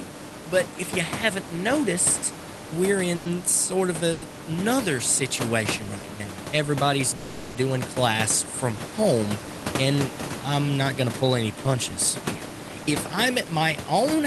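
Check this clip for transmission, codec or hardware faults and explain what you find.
Two transmission faults are audible in this speech clip: call audio freezes and jitter buffer speed-up.

The call audio freezes occur at 3.15–3.30 s (after "you haven't noticed we're", before "sort of"), at 4.12–4.24 s (after "sort of", before "another situation right now"), and at 7.16–7.57 s. Each is likely a packet delay that drained the jitter buffer, so the last sound is stretched into a fading buzz or hiss before the speech resumes intact. On a spectrogram this shows as smeared horizontal bands. The waveform shows a decaying tail.

Jitter buffer speed-up occurs at 12.21–12.94 s (after "to pull any punches"), at 111% speed, and at 13.45–14.20 s, at 106% speed. Short pitch-period chunks are cut to shrink the buffer, so the speech sounds hurried at the same pitch. On the waveform whole periods are missing while the rest keep their length, and on the spectrogram the syllables sit closer together.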